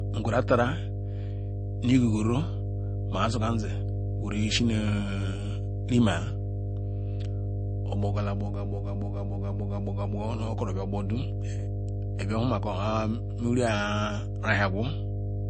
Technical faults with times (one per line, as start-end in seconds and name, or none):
0.00-15.50 mains hum
0.00-15.50 MP3 compression